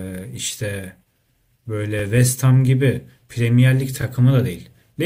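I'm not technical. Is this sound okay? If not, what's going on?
No. At 1.99–2.02 s and 4.02–4.04 s, overlapping chunks replay about 21 ms of speech every 2 seconds, a tiny stutter rather than a silent gap.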